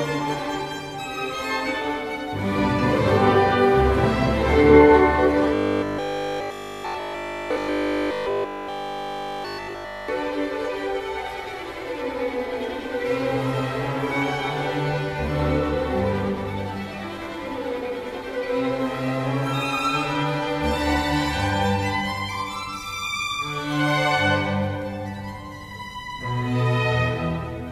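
From 5.54 s to 10.08 s the sound turns into robotic sound from repeated short buffers: a rigid, metallic buzz at 50 Hz, loosely tracking the original. The likely cause is starved input, with 20 ms fragments repeated throughout the stretch while the real audio is skipped.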